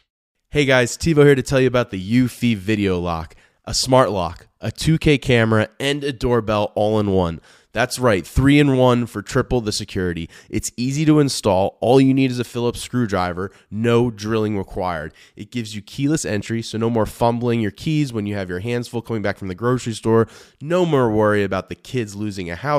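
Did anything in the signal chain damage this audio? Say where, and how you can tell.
No, nothing along the chain from capture to playback has left an audible mark on this speech recording.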